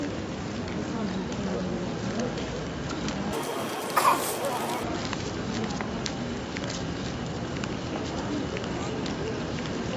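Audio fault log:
3.33 to 4.83 s, wrong sample rate: the sound jumps a full octave (12 semitones) higher and runs at double speed, then drops back to normal. The samples were played back at twice their intended rate with no conversion, which fits 16 kHz audio being clocked out at 32 kHz.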